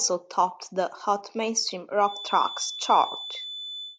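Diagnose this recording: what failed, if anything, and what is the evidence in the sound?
A feedback whistle enters at 1.99 s and continues to the end: a thin, steady 3.5 kHz tone sitting roughly 10 dB below the speech and slowly swelling and fading in level. The likely cause is an acoustic loop at playback and capture, with loudspeaker output reaching the microphone at a gain just short of runaway, so one frequency keeps ringing. Unlike an electrical whine or hum, its level drifts instead of holding fixed.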